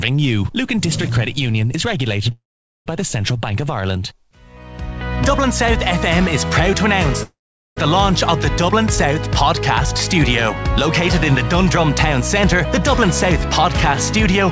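Two call audio freezes interrupt the audio, at 2.32–2.88 s and 7.23–7.78 s. Each is a brief fading buzz or hiss, then about 0.45 s and 0.42 s of silence, before the sound resumes where it stopped. The likely cause is delayed packets emptying the jitter buffer, which pushes the rest about 0.54 s later. The call path, audibly band-limited to 8 kHz as fits a G.722 wideband codec, is the route through which this arrived.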